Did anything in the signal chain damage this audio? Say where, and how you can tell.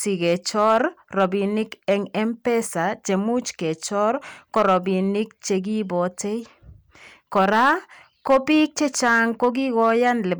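Yes: hard clipping at a gain or converter stage flattens speech peaks, about 3 to 5 dB over, crackling at 0.26–0.81, 1.20, 4.56–4.77, 7.36–7.73, 8.30–8.63 and 9.04–10.11 s.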